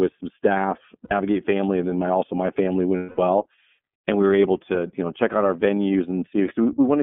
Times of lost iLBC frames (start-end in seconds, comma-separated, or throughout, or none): 1.05-1.12, 2.97-3.18